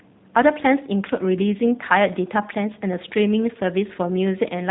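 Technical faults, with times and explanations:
Throughout, G.729 codec: plainly rough, synthetic speech rebuilt from a filter model and sparse pulses, with nothing above 3.8 kHz, which fits an 8 kbit/s codec.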